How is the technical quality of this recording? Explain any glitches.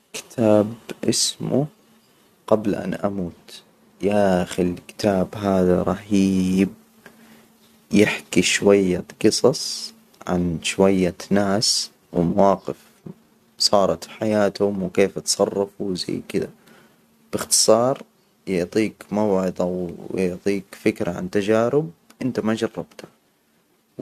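No technical faults are audible anywhere in the recording.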